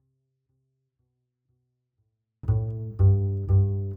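From the very start to about 2.43 s the sound is clean but sits roughly 48 dB down, so quiet you can barely make it out. That's a 24-bit alignment error (too quiet): 24-bit samples parked in the low bytes of a 32-bit word got read as full 32-bit integers, so every value lands 8 bits short of where it belongs. No distortion, just a flat, massive level drop across that stretch.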